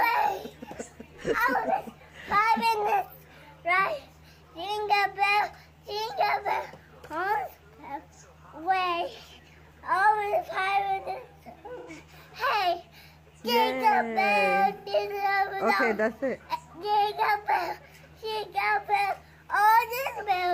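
Two brief smeared, noisy patches interrupt the audio at 11.78 to 11.89 s and 14.78 to 14.88 s. This is AAC frame loss with concealment. About 85 ms went missing each time, which fits two lost frames, and the decoder filled each gap from the preceding spectrum.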